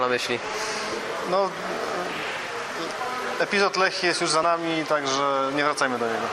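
At 4.43 s the audio jumps ahead by about one compressed frame, roughly 30 ms, which fits a 32 ms frame length. This is a case of compressed frames skipped: a frame was missing or rejected by the decoder, so its content never plays. A spectrogram shows a thin vertical discontinuity where partials shift abruptly, and the waveform shows an envelope step.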